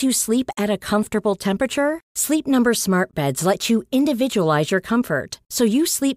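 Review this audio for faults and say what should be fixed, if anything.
A gap between stream segments occurs at 3.11 s in this speech: a hard-edged hole of about 17 ms of silence cuts into the sound and then it resumes. The timestamps of two adjacent segments don't line up, so the player inserts silence to cover the missing stretch instead of butting the segments together. The pause is added time, not lost audio, and it falls at a boundary between segments roughly 6 s long. Prevent it by making each segment's start timestamp match exactly where the previous one ends.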